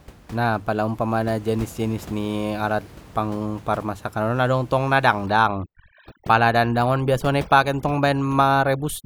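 From 5.26 s to the end, overdone noise removal takes hold: a noise reducer set far too hard cuts every frequency band it judges close to the noise level, and the quieter edges of the speech are cut along with the room noise that had been sitting about 21 dB below it. The background drops away, flecked with twinkling specks. A spectrogram shows scattered isolated dots and a hollowed, patchy speech texture.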